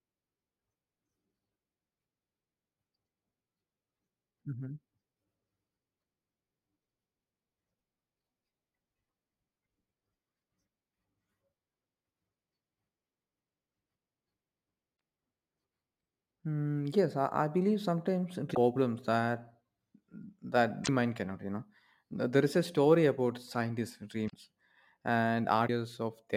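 Sample clock jitter runs through the whole recording. The converter's clock wanders by a few microseconds, so samples land slightly early or late. This adds a faint hiss, roughly 40 dB below the speech. It grows on loud, bright sounds and vanishes in pauses.

Damaged data in a compressed stream then breaks in five times. The hits come at 14.93 to 14.96 s and at 18.51 to 18.57 s, right after "believe sometimes". Another runs from 20.81 to 20.89 s, just before "mind cannot". The last two fall at 24.26 to 24.34 s and 25.64 to 25.69 s. Corrupted bytes throw the decoder off. It loses sync and searches for the next frame header. Each break is a brief chirp or blip.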